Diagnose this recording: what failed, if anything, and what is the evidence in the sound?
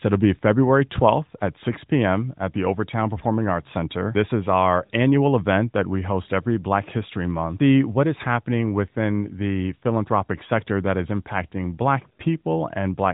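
Nothing failed here.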